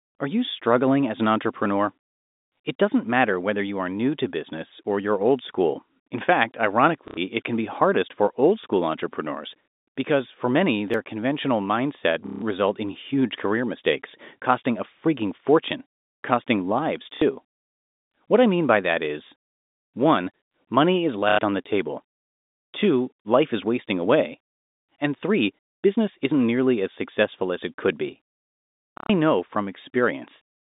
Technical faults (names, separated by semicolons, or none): packet loss with last packet repeated; dropped buffer (overrun)